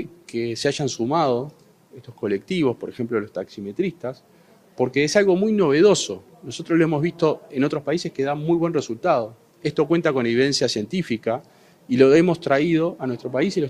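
No technical faults can be heard anywhere here.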